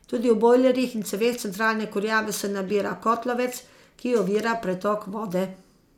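Listening to the speech here, nothing stood out as a technical fault at any point.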